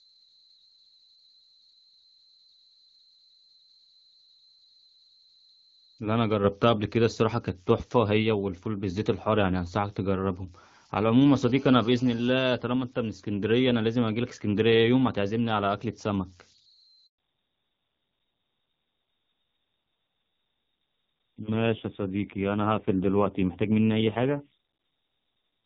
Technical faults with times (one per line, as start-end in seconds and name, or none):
0.00-25.66 converter idle tones
17.06-17.18 handover gap
17.18-25.66 fallback to narrowband